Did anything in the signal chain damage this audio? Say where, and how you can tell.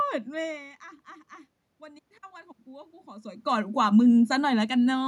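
Yes. Call-processing automatic gain rising, 1.81 to 4.36 s. Input fell about 16 dB. Gain climbs slowly about 10 dB, swelling voice and room noise together.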